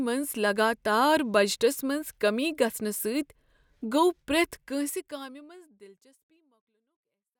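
Nothing stood out on listening to this speech, apart from a smooth fade-out over roughly the last three seconds, ending at 7.4 s.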